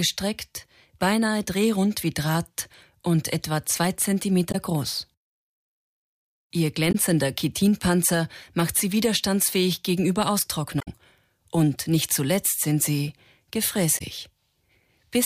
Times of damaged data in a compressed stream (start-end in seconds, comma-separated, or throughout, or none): 4.51-4.55, 6.91-6.95, 10.78-10.88, 13.97-14.02